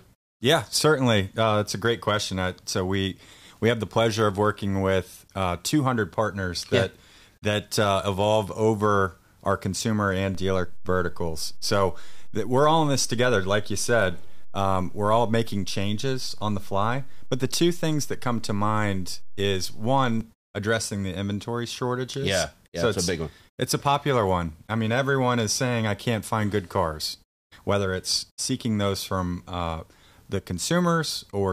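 A DC step runs from 10.35 to 20.21 s: just after "over our consumer and", the waveform's zero line jumps by about -28 dBFS, holds, then drops back before "addressing the inventory shortages". Each shift lands as a low thump or click while the speech carries on unchanged.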